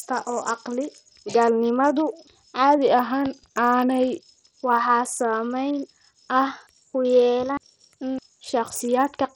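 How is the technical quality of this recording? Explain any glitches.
Not great. The whole thing has heavy coding damage, and there are two spots where the speed and pitch jump.

Throughout, the treble keeps flickering and dropping out, with gritty noise and aliasing sitting on the speech. That's likely Bluetooth SBC compression starved of bits: the upper sub-bands lose their allocation, the rest is coarsely quantised, and it fits a low rate of around 64 kbps.

From 2.78 to 4.22 s the speech slows by about 6.3% and drops roughly a semitone (113 cents), then snaps back. From 6.47 to 8.03 s it speeds up by the same 6.3% and rises about 106 cents. Each is likely a drift correction step, where clock-matching software changed the playback rate in one jump to rebalance its buffer.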